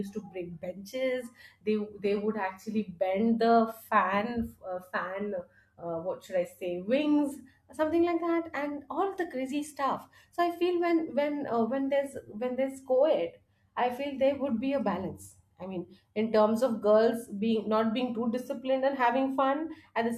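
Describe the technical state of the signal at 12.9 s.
No fault can be heard at 12.9 s, and the speech signal is intact at that point.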